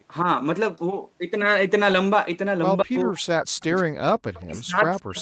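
From 2.83 to 3.99 s, the echo canceller likely mistook double talk for echo, producing speech suppressed in double talk: the voice drops in pieces for about a second, by up to about 40 dB. Within that stretch, from 3.60 to 3.83 s, loudspeaker echo likely slipped past the canceller, an echo leak: a faint copy of the voice trails 177 ms behind, about 25 dB down. From 4.44 s to the end, the same double-talk suppression returns, again cutting the voice by up to about 40 dB.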